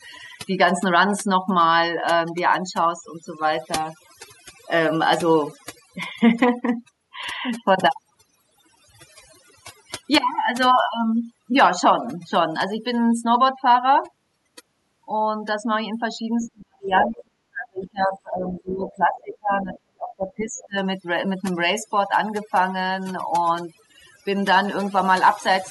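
Overdone noise removal runs through the whole speech clip: frequency bands near the noise floor are gated away, leaving near-silent, twinkling gaps. Speech suppressed in double talk from 16.51 to 20.81 s makes the talker dip by as much as about 40 dB or break up, likely an echo canceller ducking both voices while the far side talks. Other side's voice leaking through appears at 16.39–16.49, 16.97–17.21, 17.82–17.87, 18.91–18.98, 19.61–19.79 and 20.58–20.66 s as faint scraps, loudest around 17 s, where it comes close to the talker's level.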